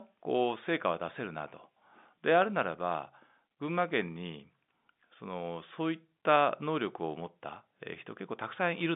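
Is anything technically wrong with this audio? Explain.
No, nothing here is actually wrong; the speech simply carries the narrow, boxy sound of ordinary G.711 telephone coding, with the line band running from about 150 Hz up to 3.6 kHz and nothing above 3.8 kHz, which is just how a normal phone call sounds.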